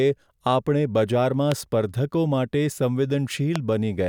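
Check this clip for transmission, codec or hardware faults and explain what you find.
Two loud pops break into the speech, at 1.52 to 1.54 s and 3.56 to 3.58 s. Each is a single sharp click standing well above the level of the speech, which carries on underneath. The likely cause is a brief voltage pulse, such as static or a switching glitch, added to the signal.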